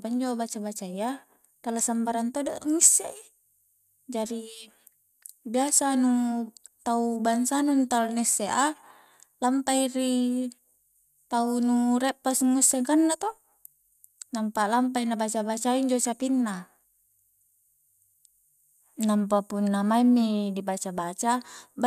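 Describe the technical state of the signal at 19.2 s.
At 19.2 s the speech signal is intact, with no audible technical fault at that moment.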